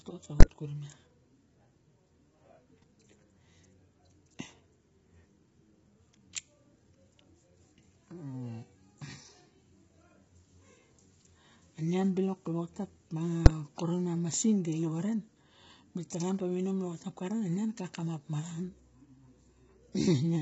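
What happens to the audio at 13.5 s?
At 13.46 s a single loud bang cuts through: invalid numbers at full scale, where a calculation produced invalid values that pinned the output at an extreme value for a block of about 5 ms. Unlike an ordinary click, it sits flat at one extreme value far beyond the speech's peaks, and it is too short to separate into two pops. Underneath, the speech sounds rough and grainy with nothing above 7.7 kHz, likely from heavy low-delay AAC compression at a low bitrate. That codec damage runs through the whole clip rather than occurring as a single event.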